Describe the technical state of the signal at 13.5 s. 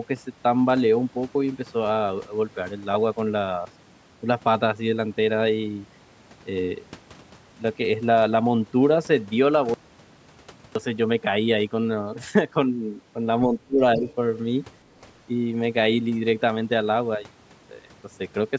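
The speech dips sharply between 13.47 and 14.07 s, sinking by around 20 dB at its deepest and affected for roughly 400 ms in all. This is speech suppressed in double talk, likely an echo canceller mistaking the talker for loudspeaker echo and attenuating both.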